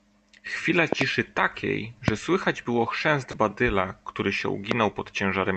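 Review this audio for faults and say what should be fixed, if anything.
Loud pops occur at 0.93 to 1.04 s (a close pair), at 2.08 to 2.10 s and at 4.71 to 4.74 s, each peaking about 20 dB above the speech, which continues underneath. An abrupt voltage step or spike, likely from a connector being disturbed, a switch, a static discharge or a driver glitch, is added to the signal, and the following circuitry shapes it into a sharp thump. To prevent this, secure cables and connectors, ground the equipment properly, and avoid switching or handling the gear while recording.

A short concealed packet loss occurs at 3.31 to 3.35 s. About 20 ms of audio never reached the decoder in time, and the receiver filled the gap by extending the preceding sound before blending back into the real signal. This produces a brief smear in the speech at that point, and a short consonant can disappear entirely. 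To prevent this, use a steadier network path with a larger jitter buffer or forward error correction enabled.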